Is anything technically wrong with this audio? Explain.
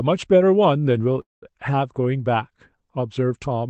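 Yes. From 1.21 to 1.44 s there is a call audio freeze, likely from delayed packets emptying the jitter buffer. The last sound is stretched into a fading buzz or hiss, then about 170 ms of near silence. The audio resumes exactly where it stopped, with nothing lost, but everything after arrives about 208 ms late. On a spectrogram this shows as smeared, decaying bands followed by a blank gap, and the waveform flattens to almost nothing there.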